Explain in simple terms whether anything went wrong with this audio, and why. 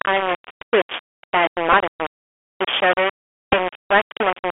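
Several things went wrong. The speech seems to have been stored with far too few loudness steps, likely only about 3 bits, rounded with no dither to smooth the steps. That adds a gritty, grainy roughness that follows the speech and is nearly as loud as the speech itself.

The sound also passed through a Bluetooth CVSD headset codec, the basic narrowband voice link headsets use. It keeps only a telephone-like range, roughly 300 Hz to 3.4 kHz, so the speech sounds thin and muffled, with scratchy s sounds and a fine hiss underneath.

Twice a Bluetooth headset packet was repeated: data between headset and phone got lost, and the chip replayed the last piece it had. At 1.73 s about 11.2 ms was lost, and from 3.53 to 3.55 s about 7.5 ms. Each is heard as a brief buzz.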